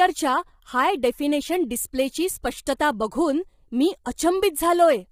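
From start to finish the speech sounds rough and grainy, with a hiss-like fuzz filling the gaps between the pitch harmonics and a top band that sounds lowered or synthetic. This is likely low-delay AAC compression, the AAC-ELD codec used in video calls. Its very short frames cannot separate closely spaced harmonics well, and the heavy damage fits a low bitrate of about 24 kbps.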